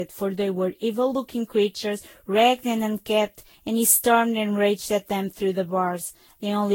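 Generation loss runs throughout the speech: swirly, smeared and hollow, with blurred attacks and nothing above 16.7 kHz. The likely cause is repeated lossy re-encoding, about fifteen passes at around 60 kbit/s, each quantising on a shifted frame grid so noise and spectral holes accumulate.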